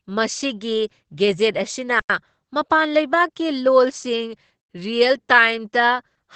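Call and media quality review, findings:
Opus voice compression, whole clip: SILK wideband at 12 kbps, nothing above 8.7 kHz; the band limit and coarse excitation coding make the speech plainly muffled, slightly hoarse and robotic.

Gap between chunks, 2.00–2.10 s and 4.60–4.70 s: 100 ms silences, 2.6 s apart; chunked delivery or playback starting each chunk late, interrupting the speech at each join.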